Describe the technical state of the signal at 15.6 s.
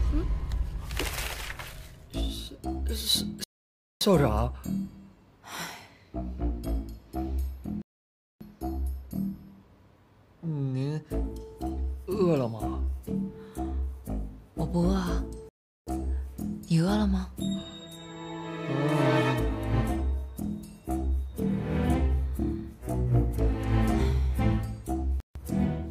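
At 15.6 s the signal is in a dropout: from 15.49 to 15.88 s the audio cuts to about 0.38 s of silence, then resumes. This is likely a Bluetooth stall, with interference delaying packets until the headphone buffer emptied and playback waited for retransmission.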